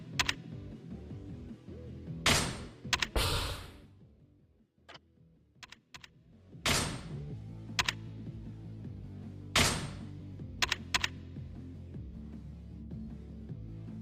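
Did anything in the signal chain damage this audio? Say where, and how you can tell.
No, nothing in the signal chain damaged this audio.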